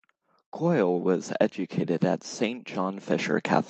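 The automatic gain control judged the input too quiet and pushed its gain up twice. From 0.59 to 1.34 s it climbs by about 4 dB, then again from 1.99 to 3.38 s by about 4 dB, so the automatic gain rising makes the speech and its background noise swell together rather than holding steady. The second, slower rise stretches over more than a second, heard through a call codec whose top end stops near 8 kHz.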